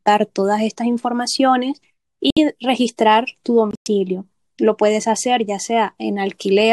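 At 2.30 s the speech drops into silence for 80 ms. At 3.71 s a longer 170 ms gap follows. Both are corrupt frame muted faults. Damaged compressed frames were rejected by the decoder and replaced with silence. Each hole starts abruptly, fits several short codec frames, and timing stays intact.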